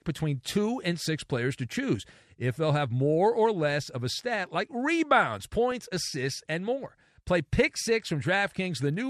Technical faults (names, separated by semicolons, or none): MP2 compression; DAB burbling